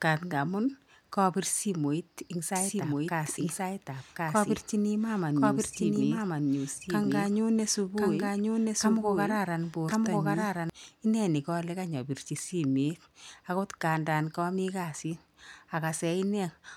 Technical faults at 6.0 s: doubled audio track

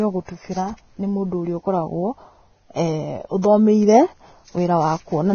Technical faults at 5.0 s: Vorbis compression

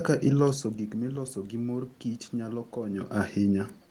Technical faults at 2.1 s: none

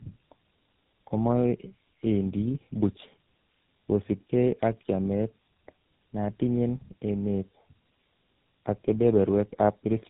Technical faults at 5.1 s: tandem speech coding

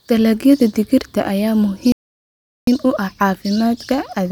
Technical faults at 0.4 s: none

